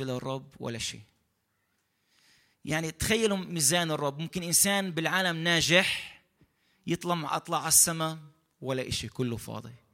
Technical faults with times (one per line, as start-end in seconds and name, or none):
none